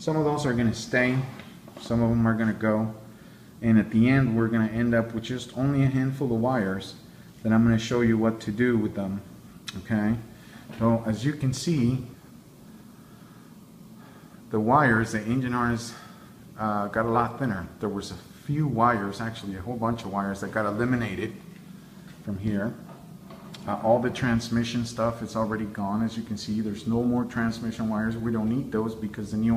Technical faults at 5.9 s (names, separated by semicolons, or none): none